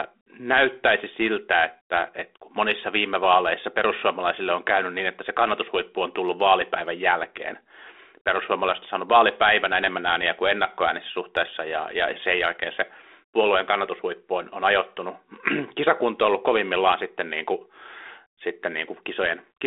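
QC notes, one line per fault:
No faults found; the speech comes through the 32 kbit/s G.726 ADPCM path at its expected 300 Hz to 3.6 kHz telephone band, with only the light coding grain that rate leaves.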